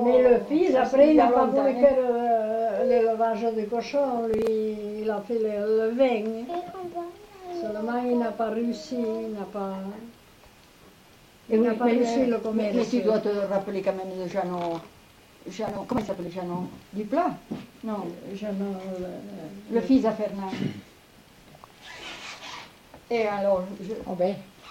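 At 4.34 s, a brief burst of processor overload crackle lasts about 0.13 s. A second, heavier one runs from 15.67 to 16.27 s. In each, the processor repeatedly misses its deadlines for buffers of roughly 10 ms, a handful in the first burst and around thirty in the second. The missed audio is skipped, so the sound jumps forward with hard edges and gives a gritty tearing. A waveform shows abrupt discontinuities. A spectrogram shows thin full-height vertical clicks.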